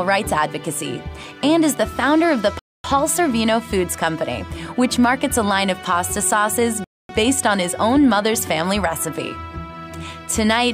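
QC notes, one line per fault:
2.59–2.84 s and 6.84–7.09 s: gap between chunks. Two 250 ms silences interrupt the sound at joins between 4 s chunks. Nothing is lost. The waveform shows near-silent stretches, and the spectrogram shows blank vertical bands.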